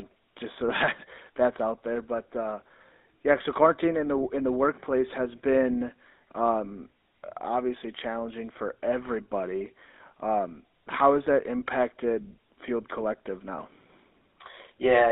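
GSM full-rate codec damage runs through the whole speech clip. Its excitation uses sparse, regularly spaced pulses, which give a plainly buzzy, gravelly roughness, which fits 13 kbps full-rate coding, while the band is squeezed to 300 Hz–3.7 kHz.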